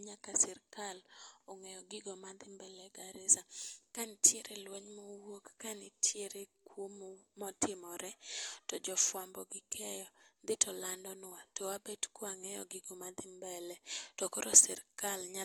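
Nothing in this speech recording stands out as a technical fault at any point, so there's nothing to flag.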